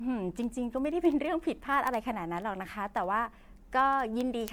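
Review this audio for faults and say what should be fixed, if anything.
Generation loss runs throughout the speech: swirly, hollow and smeared beyond what one MP3 pass near 96 kbit/s would give, likely from several decode-and-re-encode cycles. Keep a lossless master and encode only once.

Word clock ticks occur from 0.16 s to 4.48 s, about every 70 ms, roughly 70 in all. They are sharp and uneven single-sample slips from two unlocked clocks a few hundred ppm apart. Their steady spacing separates them from random clicks or dropouts. Lock the receiving device to the sender's clock.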